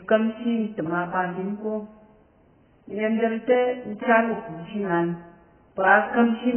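From start to finish the speech has nothing above 3.1 kHz and sounds dull, smeared and warbly, with fizzy sibilants. The likely cause is heavy AAC compression at a rate that fits roughly 8 kbps, which cuts the upper band and coarsely quantises what remains.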